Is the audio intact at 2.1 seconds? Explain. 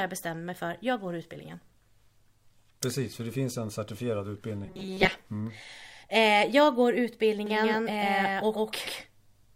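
Yes, at 2.1 seconds the speech plays through intact, with no audible fault at that moment.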